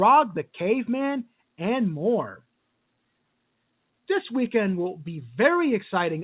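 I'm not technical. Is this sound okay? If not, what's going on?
Yes, nothing here is faulty: this is ordinary telephone-line speech, so it stops short of 4 kHz and carries the faint grain that telephone coding always adds, rising and falling with the loudness, and both are normal for that format.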